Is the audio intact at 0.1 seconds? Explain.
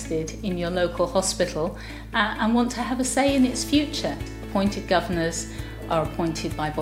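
Yes, the audio is intact at 0.1 seconds, with no dropout, click, distortion or other fault at that point.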